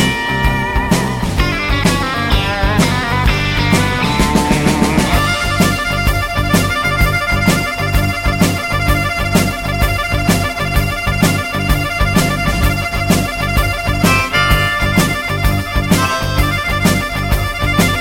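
No faults detected anywhere in the audio.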